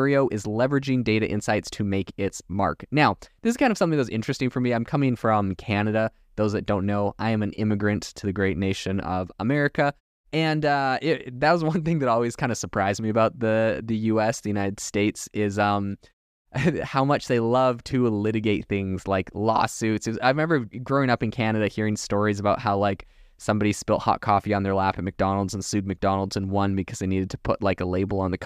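No technical faults can be heard in this speech recording.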